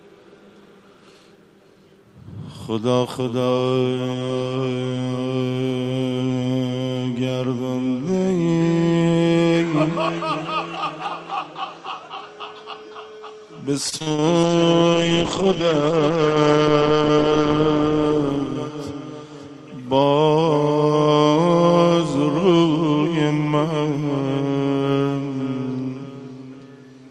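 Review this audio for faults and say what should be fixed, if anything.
Between 13.89 and 14.25 s there's repeated packet loss (robotic sound): seven quick gaps, the longest 39 ms, each papered over by stretching the previous sound. Nearly half that stretch ends up choppy.

Right after, from 14.44 to 19.12 s, comes a call bitrate drop. The encoder sounds starved, falling from roughly 40 kbps to around 9 kbps, and the top end gets cut from 20 kHz down to 8 kHz. It's rough and muffled, and worst for about 3 s.

To prevent both, give the call a steadier network path with more bandwidth headroom and some forward error correction or jitter buffering.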